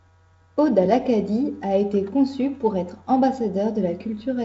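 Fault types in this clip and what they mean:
There are no fault types in this clip, so there is nothing whose meaning needs explaining.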